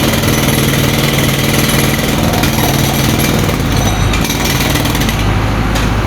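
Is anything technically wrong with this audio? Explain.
Yes. Throughout the audio there is gain pumping. The likely cause is input gain set far too high for the microphone, with a fast limiter or compressor clamping down on each loud sound and releasing in the gaps. The level swings by roughly 10 dB as a result, leaving loud and soft parts squashed close together in level.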